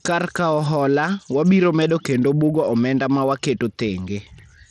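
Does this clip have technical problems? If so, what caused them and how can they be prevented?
Yes. Throughout, the speech has a dull, flickering treble with gritty noise. This sound is likely from Bluetooth SBC compression at a small bit pool, one that fits roughly 80 kbps. The top sub-bands get too few bits, and the rest are coarsely quantised. A spectrogram shows nothing above 12.8 kHz and patchy, blotchy upper bands. To prevent it, record over a wired connection or a higher-quality codec.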